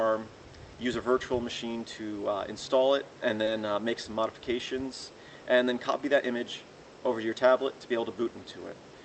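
Audio passed through a call link, with nothing above about 8 kHz. At 3.45 to 3.49 s there is short concealed packet loss: roughly 20 ms of audio arrived too late, and the receiver filled the gap by extending the preceding sound, leaving a brief smear before it blended back.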